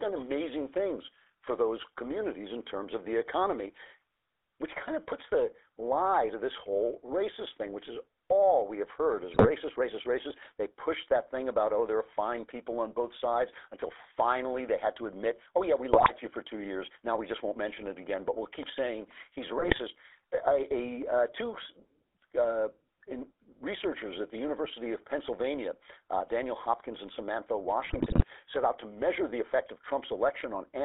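Speech passed end to end through a GSM full-rate codec, its sound fitting the 13 kbps full-rate mode. The vocal-tract model is driven by a coarse pulse excitation, giving a plainly audible buzzy, gravelly roughness, and the line band spans roughly 300 Hz to 3.6 kHz, so the speech sounds thin. GSM bit errors then corrupt the decoder's filter, pitch and gain values on the link, so the spectrum warps and the level jumps, producing squawks and gargling pops: at 9.34 to 9.50 s after "we have heard is", 15.92 to 16.11 s after "admit oh yeah we", 19.58 to 19.80 s after "we'll keep saying he's", and 27.84 to 28.25 s, the longest burst.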